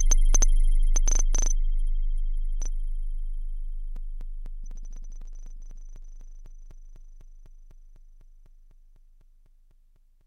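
Something blocking the USB bus or audio driver at a steady interval causes periodic USB or driver dropouts from 3.96 s to 10.21 s. Every 0.25 s a few milliseconds of audio are replaced by silence, giving a regular ticking that sounds only under signal.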